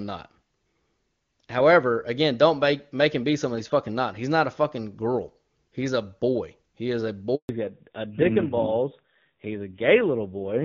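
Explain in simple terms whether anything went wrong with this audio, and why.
Two things go wrong near the end. At 7.35 s, right after "is a", there is a handover gap. The call switches from one network link to another and no sound gets through for about 140 ms, until 7.49 s. Whatever was said in that moment is lost.

From 7.49 s to the end there is a fallback to narrowband. Up to that point the call runs on the HD Voice wideband codec and sounds clear. After the switch, an older narrowband codec takes over, everything above 4 kHz disappears, and the sound becomes duller and rougher.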